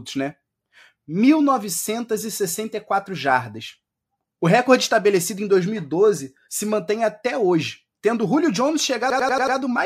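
Speech clip with a system hang loop from 9.10 to 9.57 s: one 93 ms slice repeats exactly five times at 10.8 Hz, a machine-gun stutter rather than a buzz, fitting a 4096-sample ring buffer.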